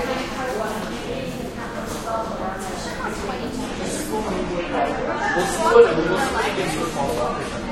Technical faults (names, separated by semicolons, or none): adaptive stream at a lower bitrate; dropped samples